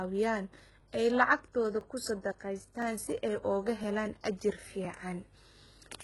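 HE-AAC compression, heard throughout this speech recording, is the likely cause of the heavily damaged treble. Nothing remains above 11.5 kHz. The upper treble below that cutoff sounds synthetic, rebuilt by copying lower bands upward, so s sounds turn gritty and metallic, which fits a bitrate around 12 kbps. Overlapping chunks cause a click-like stutter at 0.80, 1.81, 2.82, 3.84 and 4.85 s. The audio was handled in 1.0 s chunks, each starting before the previous one ended, so about 13 ms replays at every join.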